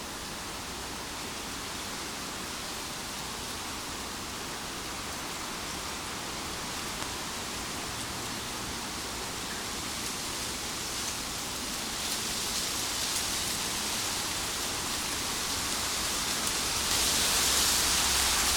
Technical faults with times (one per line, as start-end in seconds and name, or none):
7.02 damaged data in a compressed stream
15.25 damaged data in a compressed stream
16.91 damaged data in a compressed stream